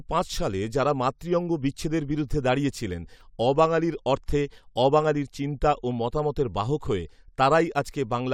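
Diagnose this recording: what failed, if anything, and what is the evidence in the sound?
Nothing failed: the recording gives no evidence in the sound of any fault at any stage.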